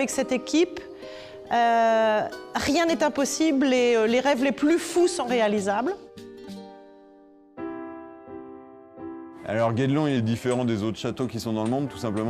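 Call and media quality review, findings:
Drift correction step, 1.49–3.00 s (+6.45% speed, about a semitone up) and 10.17–10.92 s (−6.45%, about a semitone down): likely a clock-sync resampler. Abrupt onset and snap-back, unlike wow's gradual waver.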